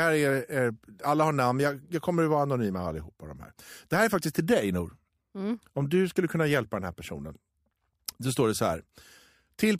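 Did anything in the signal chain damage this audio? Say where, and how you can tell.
Yes. Dropped samples, likely in the driver or buffer: a waveform jump at 4.09 s, between "här är" and "faktiskt till dig", clicks sharply.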